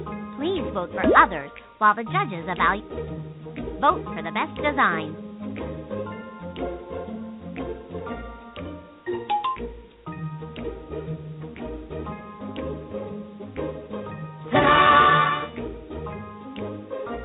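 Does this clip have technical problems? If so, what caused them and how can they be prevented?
No, nothing's gone wrong here; it's just come through a telephone-style G.711 call path, so nothing reaches above 4 kHz and there's the usual light coding grit, which is simply how that codec sounds.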